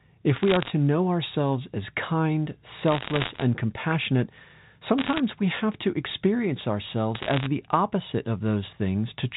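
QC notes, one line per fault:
0.36–0.70, 2.88–3.42, 4.98–5.20, 7.15–7.46 s: bit errors on a digital phone line, with flipped bits corrupting single samples into ticks and crackle. The burst before "and compassionate" is densest, at about twice the error rate.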